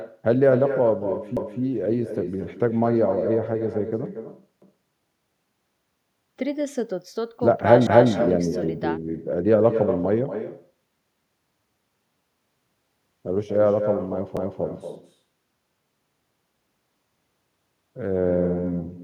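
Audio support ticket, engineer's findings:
Echo with no canceller, throughout. Every phrase trailed by a quieter, thinner copy about a fifth of a second later, about 8 dB below the direct sound. Far end on loudspeaker, its mic re-capturing playback, no acoustic echo canceller removing it before the return leg.

Overlapping chunks at 1.37, 4.62, 7.87, 11.12, 14.37 and 17.62 s. Stutter at each point, with a 250 ms stretch of audio heard twice, regular 3.25 s spacing. Probable component: chunked processing or transport stage, 3 s chunks each starting 250 ms before the previous one ended, so every join replays the overlap instead of crossfading or trimming it.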